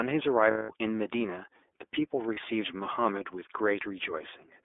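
From start to finish the speech sounds boxed-in and slightly buzzy, with a rough, synthetic edge. There is no bass below about 300 Hz and nothing above 3.6 kHz, so sibilants lose their crispness. This is the iLBC codec, a narrowband VoIP coder that rebuilds the voice from a coarse model of each frame's excitation, independently of the previous frame. Its plainly audible grain fits the 13.33 kbps mode with 30 ms frames.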